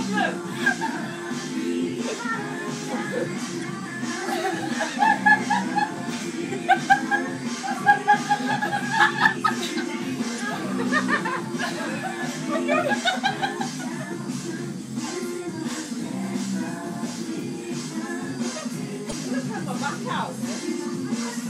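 Three short bursts of damaged data in a compressed stream, at 3.59–3.64 s, 10.36–10.40 s and 19.09–19.13 s: corrupted frames make the decoder misread and resynchronise, producing brief glitches.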